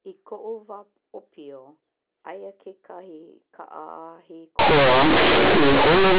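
Speech over a G.711 A-law telephone line, band-limited below 4 kHz, until at 4.59 s it collapses into loud, harsh buzz through to the end. That's companded audio read as linear: the A-law bytes are played as raw 8-bit samples without expansion, so quiet passages blow up and everything distorts.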